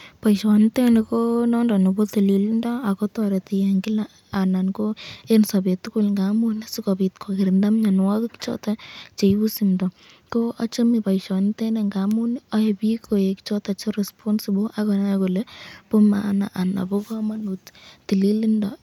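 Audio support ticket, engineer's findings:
Listened through the full speech recording and nothing stood out as a problem anywhere in it.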